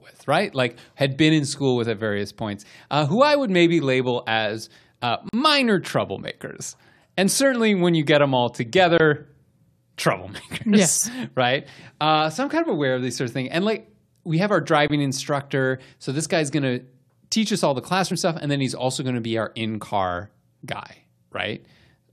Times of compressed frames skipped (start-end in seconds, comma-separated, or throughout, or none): 2.64, 18.10